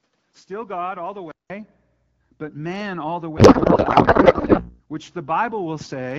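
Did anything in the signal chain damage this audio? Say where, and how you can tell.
Yes. At the input stage, from 0 to 1.5 s the sound is about 10 dB quieter and dull, with a narrower band and extra noise. A 0.19 s gap follows. Likely an input switched to a poorer device.

At the codec stage, from 3.37 to 4.81 s the speech turns to garbled, warbling noise. This is a codec payload misread: octet-aligned AMR frames were unpacked as bandwidth-efficient, so every field is shifted.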